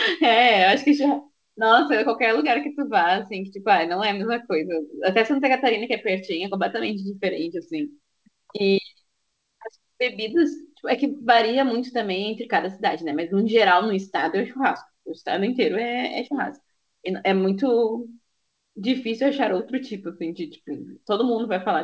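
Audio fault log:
No faults heard in this speech recording.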